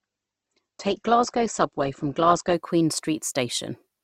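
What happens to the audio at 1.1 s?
At 1.1 s the speech is inside an adaptive stream starting at a low bitrate, lasting from 0.0 to 2.54 s. Nothing above 8.3 kHz and heavier codec smearing fit a 16 kbit/s Opus start. Unlike a fixed filter, quality jumps seamlessly at 2.54 s.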